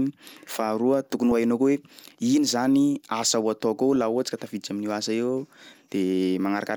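A speech clip with two short bursts of DAB burbling, at 1.31 s and 3.96 s: short blips of noise where corrupted MP2 data hit single sub-bands. That points to weak reception, with a small error rate slipping past correction.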